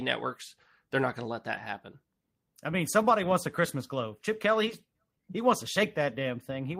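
At 1.53 to 1.63 s, after "not going to let", a lost packet is rebuilt from error correction. About 60 ms sound rough and noisy, not silent.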